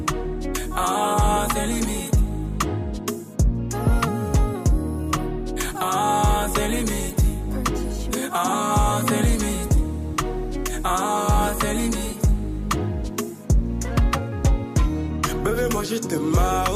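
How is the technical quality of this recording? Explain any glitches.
Nothing in the recording stood out as a technical problem on listening, so there are no glitches to explain.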